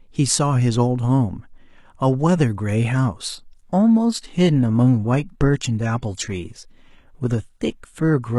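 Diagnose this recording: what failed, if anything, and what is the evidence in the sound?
Network stage: from 3.29 s the adaptive stream switches to a lower bitrate with no gap. The treble turns synthetic, pointing to low-bitrate HE-AAC replacing full-band AAC.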